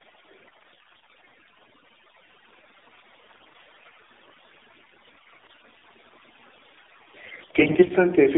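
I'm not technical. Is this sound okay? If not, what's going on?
No. The speech sounds muffled and boxy, like an old mobile call, and noticeably buzzy and artificial. That comes from the AMR narrowband mobile codec, the compression used on older phone networks. It keeps only a narrow band of sound, roughly 300 Hz to 3.7 kHz, and rebuilds the voice from a simplified model.

Throughout, the background is eerily silent apart from small twinkling specks. This is overdone noise removal. A cleanup tool was set too aggressively and switched off parts of the sound it mistook for noise, including quieter parts of the voice.

In four stretches the voice turns hoarse, scratchy and gargly, though its pitch and loudness stay roughly the same: 0.48 to 1.34 s, 3.26 to 3.99 s, 5.06 to 5.54 s and 7.26 to 7.92 s. These are AMR bit errors. On a weak phone link, some of the transmitted data arrived corrupted, so the voice was rebuilt from partly wrong instructions. 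The first and last stretches sound worst.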